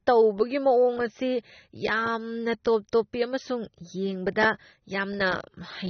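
From start to finish the speech sounds dull and smeared. Nothing is heard above 6.3 kHz. Sibilants turn fizzy and sustained sounds warble. The likely cause is AAC compression, with the encoder discarding detail to save data, which fits a bitrate near 24 kbps.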